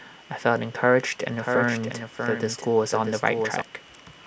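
From 1.34 s to 3.62 s a doubled audio track appears: a second, full-band copy of the speech trails roughly 0.7 s behind, about 5 dB quieter, dry and without decay. It switches in and out abruptly, likely from a slower duplicate capture path.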